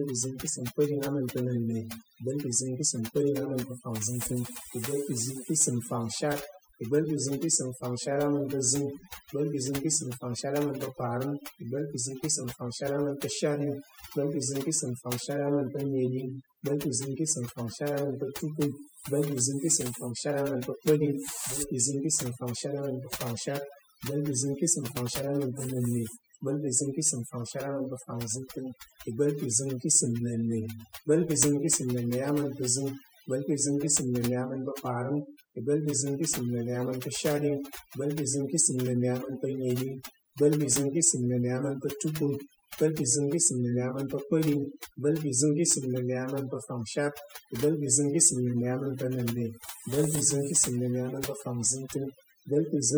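A speech recording with overdone noise removal from start to finish: the denoiser was pushed so hard that frequency bands near its noise estimate get pulled right down, taking quiet parts of the voice with them. You get near-silent gaps full of twinkling specks.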